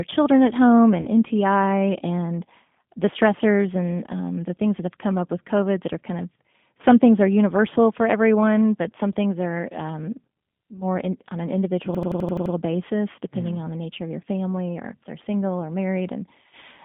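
The speech runs through a G.729 codec for the whole clip, with plainly audible damage. At 8 kbit/s the decoder rebuilds each 10 ms frame from a vocal tract filter and pitch predictor, so the line is confined to about 200 Hz to 3.5 kHz and sounds rough and synthetic.

From 1.01 to 1.08 s there is VoIP packet loss concealed by the speech codec. About 40 ms of audio is missing, which fits two lost packets. The decoder extends its last pitch and filter state with falling gain, leaving a brief fading smear. The following speech stays weakened for a short while.

From 11.95 to 12.54 s a system hang loop is audible. An 85.33 ms block of audio repeats exactly seven times at 11.7 Hz, producing a machine-gun stutter. The loop length fits a 4096-sample ring buffer being replayed while the system was stalled.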